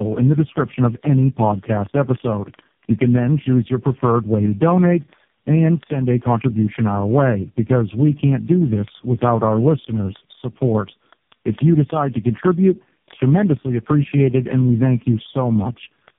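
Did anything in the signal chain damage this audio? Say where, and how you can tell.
Yes. Tandem speech coding at the codec stage: the whole clip went through three speech coders in a row (GSM full rate, then AMR-NB twice), so it sounds rough, muffled and warbly, with nothing above 3.7 kHz.

Word clock ticks on a digital link: from 0.12 s to 16.18 s there are hundreds of steady ticks, about every 20 ms. An unlocked receiver clock is drifting by around a tenth of a percent and slipping one sample each time.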